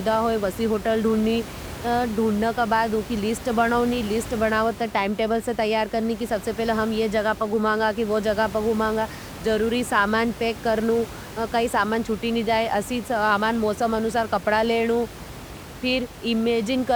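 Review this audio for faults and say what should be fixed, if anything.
Nothing in this audio needs to be fixed, as no faults turn up on review.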